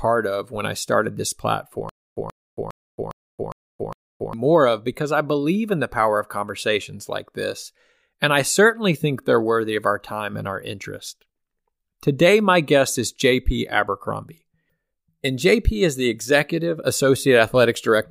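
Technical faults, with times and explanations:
1.89–4.33 s, stutter with silent gaps: after "when I started this", a 132 ms burst repeats six times, 407 ms apart, likely from a stalled stream. The waveform shows identical blocks separated by flat gaps.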